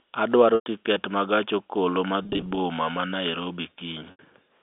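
Packet loss with pitch repetition occurs at 0.55–0.66 s (110 ms lost), 2.23–2.57 s (160 ms scattered, runs up to 20 ms) and 4.11–4.19 s (80 ms). The receiver loops the last pitch period: the scattered runs sound briefly held and buzzy, while the longer gaps fade toward silence.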